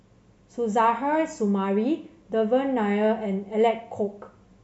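No technical faults can be heard anywhere in the recording.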